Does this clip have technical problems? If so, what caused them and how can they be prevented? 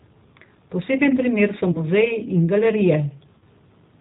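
Yes. The G.729 codec is present throughout the audio. Its rough, slightly synthetic sound fits an 8 kbit/s codec that rebuilds speech from a vocal-tract filter, pitch predictor and sparse pulses. A spectrogram shows a hard ceiling at 4 kHz with nothing above. Prevent it by using a wideband codec such as G.722 or Opus.

VoIP packet loss concealed by the speech codec occurs at 1.72–1.85 s and 3.38–3.44 s. Each time, 30 ms of audio went missing, which fits one lost packet. The decoder stretched its last pitch and filter into a buzzy tone or coloured noise that fades, and recovery lingers afterwards. On a spectrogram, the last spectrum freezes into flat, dimming bands. Prevent it with forward error correction, a larger jitter buffer or a more stable network path.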